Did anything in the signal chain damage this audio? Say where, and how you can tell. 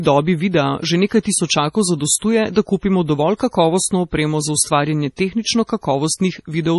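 Yes, at the codec stage: heavy MP3 compression, likely near 32 kbps, removes everything above 11.4 kHz and leaves the speech watery and swirly throughout.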